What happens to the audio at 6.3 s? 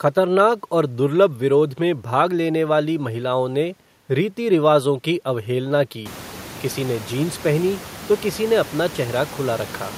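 At 6.3 s the audio is intact, with only the room's own background noise, which has risen noticeably by this point but still sits about 19 dB below the speech.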